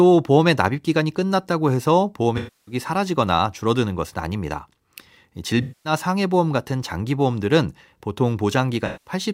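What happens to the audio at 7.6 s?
At 7.6 s the audio plays through intact, with no dropout, click, distortion or other technical fault at that point.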